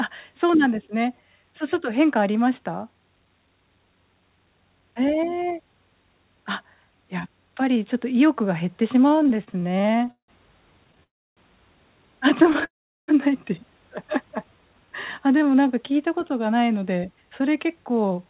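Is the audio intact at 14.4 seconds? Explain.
No. A jitter buffer slow-down runs from 14.28 to 15.95 s. The receiver's buffer ran low or had just raised its target delay, so it repeated single pitch periods to rebuild its reserve. This adds about 200 ms. The speech plays at 88% speed, drawn out but at unchanged pitch.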